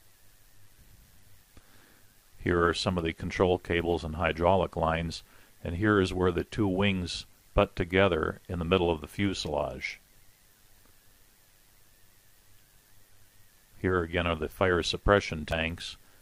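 Overlap-add ripple runs through the whole audio: the level dips by about 6 dB around a hundred times a second, a rough, metallic buzz from frames rejoined without constant-gain overlap.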